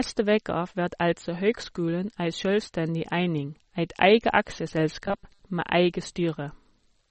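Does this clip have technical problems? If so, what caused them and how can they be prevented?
Yes. Throughout the speech there is plainly audible MP3 compression. Nothing reaches above 8.3 kHz, so the top end sounds dull, and the remaining sound has the watery, swirling texture of spectral lines switching on and off between frames. That is likely a low-bitrate MP3 encode, and the damage fits something around 32 kbps, too few bits to hold the treble or the weaker detail. To prevent it, encode at a higher bitrate or keep an uncompressed or lossless copy for distribution.

From 5.06 to 5.45 s, the speech becomes a robotic sound from repeated short buffers: a rigid, metallic buzz at 200 Hz that loosely tracks the speech. The likely cause is audio arriving too slowly, so the playback repeats its last short block while real audio is dropped. A 200 Hz buzz points to a block of about 5 ms, and roughly half of that stretch seems to be repeats. 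To prevent it, enlarge the audio buffer or reduce processing load so new audio arrives on time.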